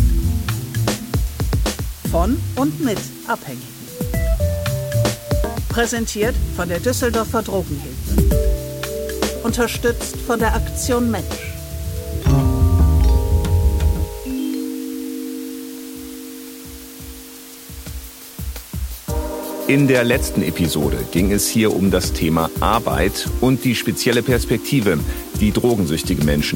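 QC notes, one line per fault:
Throughout: low bit depth with dither. The sound is carried on what amounts to 7 bits, so each sample is rounded to one of very few levels, and random dither is added before that rounding. The dither breaks the link between the rounding error and the signal, so the error spreads out as a steady, even white hiss with no gritty distortion. That hiss sits around 20 dB below the signal and stays constant across the whole clip.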